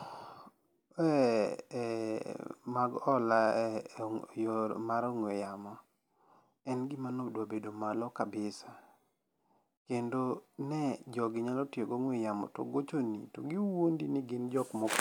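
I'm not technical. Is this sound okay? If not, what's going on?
Yes, nothing stood out as a problem when listening to this speech recording.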